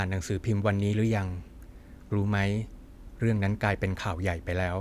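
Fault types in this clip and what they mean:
No technical faults can be heard in this recording.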